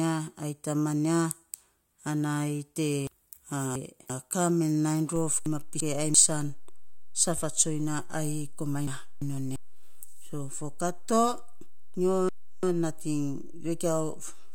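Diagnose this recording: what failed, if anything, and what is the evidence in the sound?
Chunks out of order at the driver or buffer stage: the speech jumbles at 3.07 to 4.10 s, just before "ka men", with one block arriving two chunks late. It happens again at 5.46 to 6.14 s, 8.88 to 9.56 s and 11.95 to 12.63 s, each time one chunk late. The blocks are 341 ms long, and each event leaves three hard joins. Unlike a dropout, no audio is missing; it is only out of sequence.

DC step at the converter or analogue input: a single low thump at 5.16 s, after which the waveform's zero line stays offset until the end of the clip. The speech itself continues unchanged. Unlike a transient click, the baseline never returns to zero, which points to an offset being switched in or a recalibration.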